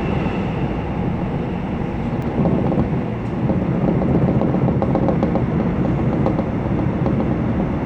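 At 2.22 s there is a block of digital silence. The sound drops straight to silence for 2.9 ms, fitting a 128-sample buffer left unfilled. It is heard as a tick or dip.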